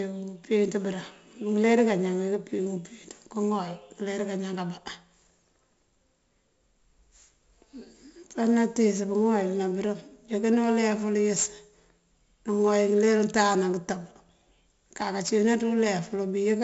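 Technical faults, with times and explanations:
Throughout, 4-bit ADPCM compression: every sample is coded as a small 4-bit step from a predicted value, so the error rides along as gritty hiss that swells with each loud syllable, and sharp consonant attacks smear because the step size can't climb fast enough. The damage here is heavy. Nothing reaches past about 7.7 kHz, which points to a 16 kHz sample rate and a 64 kbps stream, so the speech also sounds dull.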